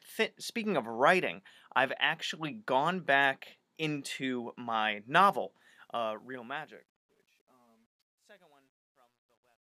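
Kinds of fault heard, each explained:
Truncation distortion on a fade: from 5.61 s to the end at 9.73 s, the fade-out is stored at a depth that fits about 11 bits, with no dither added, so each sample gets rounded to a coarse step. As the level sinks toward those steps the waveform becomes blocky, and from 7.08 s onward the tail turns gritty instead of dissolving smoothly into quiet.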